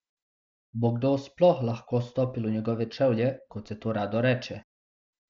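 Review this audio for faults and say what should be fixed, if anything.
Nothing stood out on listening to this speech, so there is nothing that needs fixing.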